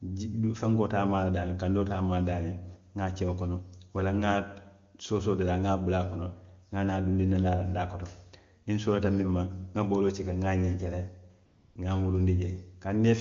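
At 11.45 s the audio drops into AMR comfort noise for 0.3 s, until 11.75 s: the sending phone judged the signal silent and stopped transmitting speech frames, so the receiver synthesised a smooth, steady noise in place of the real background, which switches in and out audibly.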